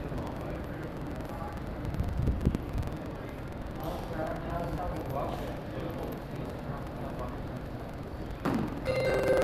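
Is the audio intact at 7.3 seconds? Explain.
No. At 7.3 seconds, as through the whole clip, a robotic rattle rides on the sound, a steady buzz at about 21.5 Hz that is present only while there is signal. This is buffer tearing. The writing program and the reading hardware have slipped, so they cross inside each period, which fits a 2048-sample buffer. Roughly a tenth of every buffer holds audio from around a tenth of a second earlier, with hard joins on both sides.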